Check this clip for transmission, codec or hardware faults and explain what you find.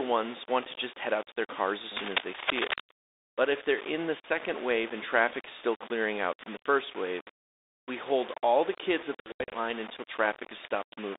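Three kinds of fault are present in this speech: a grainy quantisation distortion throughout, a burst of scratching noise near the start, and two dropouts from packet loss on what sounds like a 32 kbit/s G.726 ADPCM telephone link, whose 300 Hz to 3.7 kHz band is audible throughout.

Low bit depth without dither runs the whole length. The speech has a coarse, gritty edge that rises and falls with the voice, and the quietest tails break up into sputter or drop straight to silence. This is likely caused by rounding to very few levels, around 6 bits, with no dither. Without dither the rounding error tracks the waveform, so it turns into distortion rather than steady hiss, sitting about 15 dB below the signal. On a waveform, quiet passages show visible staircase steps and flat stretches. On a spectrogram, a dense, speech-shaped haze fills the band alongside the voice and disappears in its pauses.

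Cable scratch noise occurs from 1.9 to 2.8 s. A rough, uneven crackling and rustling lies over the speech, only about 5 dB below it. It is likely the result of a worn cable, connector or control being moved, so that the contact resistance jumps about rapidly and injects irregular bursts. A waveform shows a jagged cluster of spikes riding on the speech. On a spectrogram it appears as broadband vertical streaks scattered unevenly across that span.

Packet loss on an ADPCM call appears twice. At 4.2 s a hard-edged gap of 40 ms cuts into the speech, which fits about two lost packets. From 9.2 to 9.53 s, 200 ms goes missing in pieces spread over 320 ms, with the longest single hole 80 ms, pointing to about ten packets. Each gap is filled with silence. Because the receiving decoder's prediction and step size no longer match the sender's, the speech comes back slightly distorted for some tens of milliseconds before it settles. 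A waveform shows flat-line holes with abrupt edges. On a spectrogram these appear as blank vertical bars with a brief smear of energy where the sound resumes.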